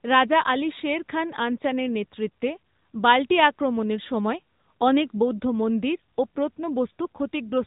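From start to finish the speech has been through the AMR narrowband mobile codec, and the damage is easy to hear. Everything is squeezed into a phone-call band with nothing above about 3.8 kHz, so sibilants lose their hiss and the voice sounds boxy. The codec rebuilds the voice from a simple vocal-tract model fed by sparse pulses, which leaves a buzzy, synthetic edge, consistent with one of the higher-rate modes, 10.2 kbps.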